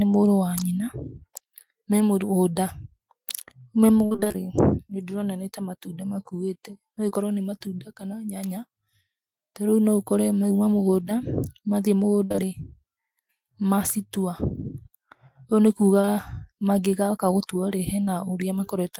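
From 4.05 to 4.38 s the speech turns choppy. This is repeated packet loss with a robotic sound: seven gaps, the longest 53 ms, filled so close together that patched sound makes up about 55% of the stretch. Unlike a single dropout, the warble recurs before the voice can recover.

At 7.09 to 7.13 s there is short concealed packet loss. About 20 ms went missing and was filled by extending the preceding sound, so it comes across as a brief smear or wobble rather than an audible hole.

From 12.25 to 12.45 s a burst of packet loss removes about 60 ms. The last sound is stretched into a held buzz or hiss that fades as the gap lengthens, and then the speech picks up again further along. Two back-to-back 20 ms concealments at 12.32 to 12.40 s sit inside this burst. What separates it from the isolated blips is the longer, decaying fill and the jump forward in the speech.

Two more short concealed losses, each about 20 ms, follow back to back at 16.01 to 16.09 s, giving a double smear. 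A last one at 18.05 to 18.09 s is another momentary wobble with no fade.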